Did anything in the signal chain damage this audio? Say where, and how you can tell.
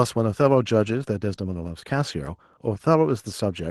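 No, nothing in the chain can be heard damaging this speech recording. No stage from capture to playback leaves a trace in it.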